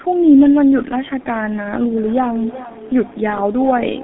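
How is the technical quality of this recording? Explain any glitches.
Technical quality is poor, limited by heavy low-bitrate codec damage across the whole recording. Throughout, the speech carries G.723.1 codec artefacts. The codec works in coarse 30 ms frames and refreshes its vocal-tract model slowly, so consonants smear and voicing turns hoarse. The band runs only from about 200 Hz to 3.6 kHz, leaving a muffled, boxy sound, which fits a bitrate near 6.3 kbit/s.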